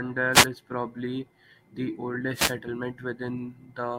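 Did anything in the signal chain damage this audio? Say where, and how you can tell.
Yes: wireless microphone noise hits on the analogue radio link, at 0.33–0.46 s before "is probably the" and 2.33–2.54 s after it. Signal fades let receiver static through, seen as broadband spectrogram smears.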